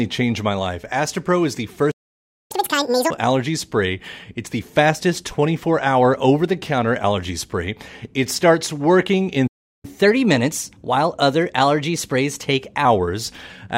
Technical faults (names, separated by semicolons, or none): playback stall; catch-up at higher speed